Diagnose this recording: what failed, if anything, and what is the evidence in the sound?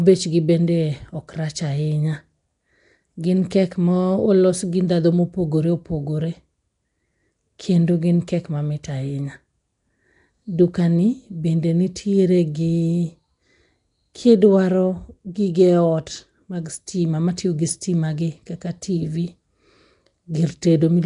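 Throughout the speech there is a rough, hissy halo and a smeared, underwater quality, with nothing above 10.6 kHz. The stage is the codec: likely Nellymoser compression, whose fixed bit budget starves weak bands and fills them with noise, consistent with a 44 kbps stream.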